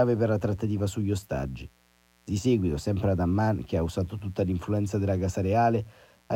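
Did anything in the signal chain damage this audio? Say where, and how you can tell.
Yes. Mains buzz runs through the whole speech clip, from start to finish, sitting around 35 dB below the speech. It is a steady, raspy buzz built on 60 Hz, which points to the analogue wiring stage. A dimmer, rectifier or poorly shielded cable injects sharp switching spikes twice per mains cycle, and those spikes carry a dense series of 60 Hz harmonics reaching into the kilohertz range, giving the buzz its edge rather than a pure hum.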